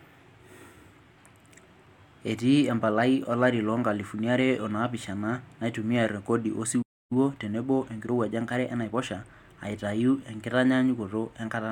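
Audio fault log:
6.82–7.12 s playback stall: the speech cuts off mid-flow into silence for about 0.29 s, too abrupt to be a natural pause. The likely cause is the player running out of buffered data or its output thread being blocked until it recovered.
7.12–9.02 s time-compressed catch-up: after the stall the speech runs about 1.15 times faster for roughly 1.9 s, shortening the backlog by cutting and cross-fading small pieces. Pitch stays normal, unlike a resampling speed-up.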